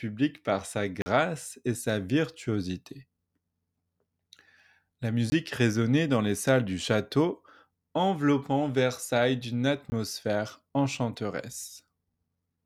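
The audio path likely fails three times to deliver samples in time, and each gap is filled with a block of digital silence. From 1.02 to 1.06 s, between "par sa" and "et sa virtuosité", 40 ms of this speech drops out. At 5.30 to 5.32 s, just before "résonnait dans les salles", a 20 ms block cuts in, and another 20 ms block falls at 9.90 to 9.92 s. Each edge is hard, with no fade, so the longer block leaves a short hole.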